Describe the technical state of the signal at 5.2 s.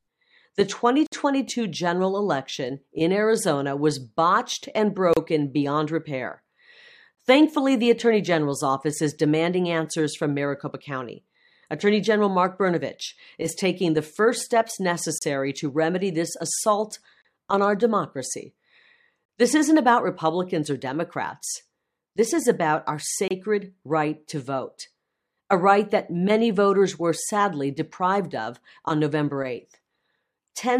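At 5.13 to 5.17 s the speech drops into a hard-edged silence of about 32 ms, a gap between stream segments. The timestamps of adjacent segments, which fit a 2-second segment length, leave a short hole that the player fills with silence; nothing is lost.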